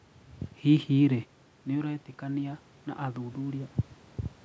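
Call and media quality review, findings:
Automatic gain rising, 1.09–3.8 s: AGC gradually lifts voice and room noise together by about 4 dB, chasing an input drop of about 10 dB after the talker moves back around 1 s.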